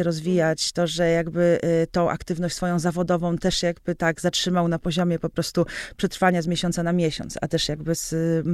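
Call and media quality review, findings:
No audible faults found.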